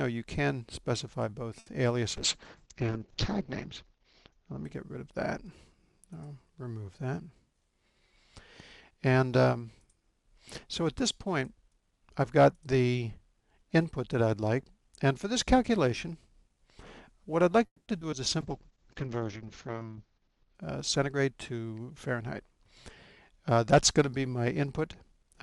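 The audio has network faults from a call. At 1.59 to 1.68 s there is a short stall from a late packet. The jitter buffer ran dry, so the last sound was stretched by 70 ms. Nothing is lost, but that moment is held too long. From 2.17 to 6.20 s a call bitrate drop takes the encoder from 96 to 7 kbps. The top end falls from 20 kHz to 8 kHz, so the sound turns muffled and watery. It is roughest for about 1.2 s at the lowest rate. A second call bitrate drop, from 18.42 to 20.61 s, goes from 96 to 8 kbps. It has the same 8 kHz cutoff and coarse, dull texture, with the lowest rate held for about 2.2 s. At 6.88 to 7.36 s a jitter buffer speed-up plays the audio at 106% speed. The receiver cut a few tens of milliseconds of pitch-period pieces to shed excess delay. The pitch stays the same but the audio sounds hurried. Another jitter buffer speed-up runs from 19.92 to 23.58 s at 104%, trimming about 150 ms in total. 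At 17.66 to 18.14 s repeated packet loss gives a robotic sound. Three gaps follow one another, the longest 200 ms. About half of that stretch is patched by extending earlier sound, and 60 ms is simply missing. The result is choppy.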